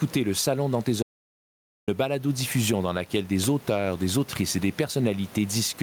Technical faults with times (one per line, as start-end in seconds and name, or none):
0.00-5.82 gain pumping
1.03-1.88 audio dropout to silence